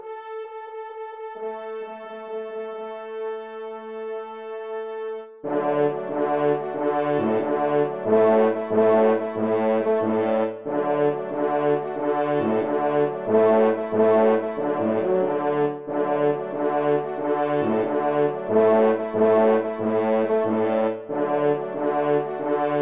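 No technical faults can be heard anywhere in this audio.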